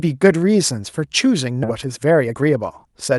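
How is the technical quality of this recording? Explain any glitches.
Two glitches are audible, both from the call's jitter buffer, heard through a call codec whose coding noise and high-frequency cut-off near 12 kHz come with the path.

Skip ahead, at 1.63 to 1.65 s: the jitter buffer dropped a stretch of queued audio, roughly 0.7 s, and joined the two sides with no filler. The speech jumps forward abruptly, with material simply missing at the splice.

Jitter buffer speed-up, from 1.75 to 3.09 s: with too much audio still queued, the receiver repeatedly cut out short pitch-period pieces, roughly 0.2 s in total. Speech runs about 15% faster at unchanged pitch, sounding hurried.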